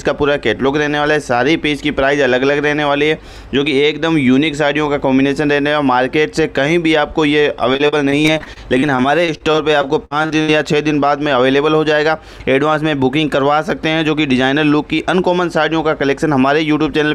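From 7.73 to 10.5 s, repeated packet loss makes the sound choppy and robotic. Some two dozen brief holes, the longest 64 ms, are patched by stretching the preceding sound. A spectrogram shows frequent thin breaks and flat, smeared repeats, and the waveform stutters.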